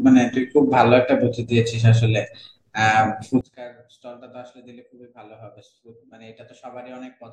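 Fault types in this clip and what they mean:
One channel inverted: from 3.41 s to the end, the speech drops by about 26 dB and turns faint, likely because one stereo channel has reversed polarity, so the centred content common to both channels cancels when they are summed to mono.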